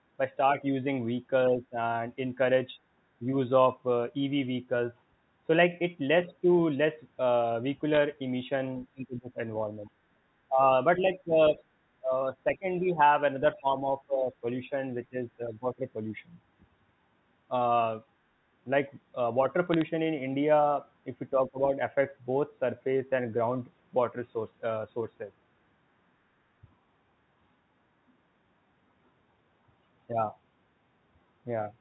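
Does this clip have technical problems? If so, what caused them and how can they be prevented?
Yes. Speech suppressed in double talk occurs at 1.48–1.77 s, 8.93–15.99 s and 21.34–21.76 s, with the level dipping by about 10, 20 and 15 dB. The likely cause is the echo canceller mistaking overlapping far-end speech for echo and attenuating both. A full-duplex-capable canceller with better double-talk detection, or a headset, prevents it.

Bit errors on a digital phone line give sharp ticks at 7.94–7.97 s and a short burst of crackle at 19.74–19.82 s. Each flipped bit in the mu-law stream corrupts a single sample, and a hit on a high-order or sign bit produces a spike. A cleaner transmission link with error checking avoids this.

Other side's voice leaking through is audible at 8.89–9.94 s, 11.24–11.62 s and 12.55–14.33 s. It sits around 30–35 dB below the main speech. It is likely residual loudspeaker echo that the canceller failed to remove from the microphone path. 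Lower speaker volume, better acoustic isolation or a headset prevents it.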